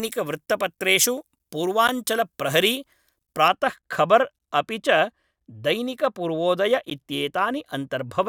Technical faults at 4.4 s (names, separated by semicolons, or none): gap between chunks